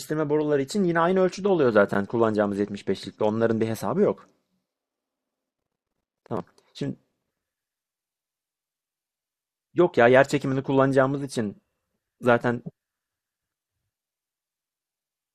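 Nothing in this recording of speech stands out as a technical fault; it just runs along without any glitch catching the ear.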